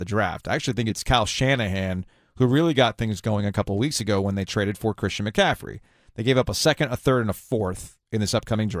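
A speech recording, and nothing is technically wrong with it.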